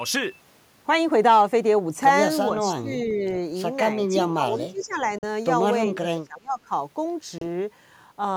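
From 2.48 to 3.23 s the speech dips by up to about 15 dB for roughly half a second in total. That's speech suppressed in double talk, likely because the echo canceller heard the far side on the loudspeaker at the same moment and couldn't tell this talker apart from its own echo, so it turned everything down. The same thing happens again from 3.97 to 5.06 s, with a drop of up to about 15 dB spread over roughly a second.

Inside that stretch, at 4.79 s, a short echo leak comes through. It's a delayed copy arriving 382 ms late and about 25 dB below the speech, likely the loudspeaker side's canceller letting a scrap of what its microphone picked up slip back into the call.

At 5.18 s there's a Bluetooth dropout: a 42 ms hole with abrupt or quickly faded edges, and then the sound picks up as if it had kept playing underneath. It likely comes from packets reaching the headphones too late, and the gap fits about three lost frames.

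From 5.92 to 6.71 s comes the deepest suppression, up to about 25 dB for roughly 0.7 s, with the same double-talk mechanism likely behind it.

At 7.38 s a second Bluetooth dropout cuts 28 ms, which points to about two lost frames.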